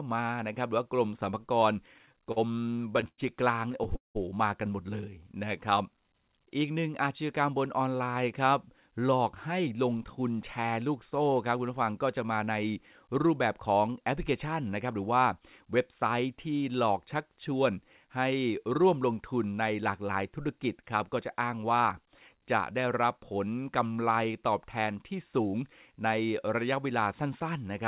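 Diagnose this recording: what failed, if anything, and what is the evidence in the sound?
Repeated stalls (stutter) at the network and jitter buffer stage. From 1.94 to 3.20 s the speech halts around sixteen times, with about 280 ms held over and the longest hold 100 ms. From 3.72 to 4.17 s five holds cover about half the span, the longest 190 ms. Packets arrived too late, so the last sound was stretched until data resumed.

Jitter buffer slow-down from 5.09 to 5.45 s. The speech drags to 86% speed at unchanged pitch, with 58 ms added. The buffer was refilling its reserve by repeating single pitch periods. The sound is band-limited to 4 kHz, consistent with G.711 at 64 kbps.

Jitter buffer speed-up in four stretches: 7.50–9.67 s at 108%, removing about a fifth of a second; 19.46–20.00 s at 109%; 22.58–23.48 s and 25.26–26.21 s at 108%. Pitch holds but delivery sounds hurried, as the receiver cut pitch periods to shed excess buffered delay.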